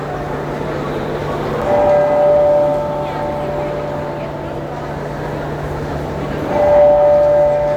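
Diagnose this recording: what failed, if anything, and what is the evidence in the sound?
The driver or buffer stage hiccups at 1.61 s with an underrun with held sample. The output buffer ran dry for about 5 ms and the converter simply held its last value, so the waveform flatlines. About 5 ms of live sound goes missing.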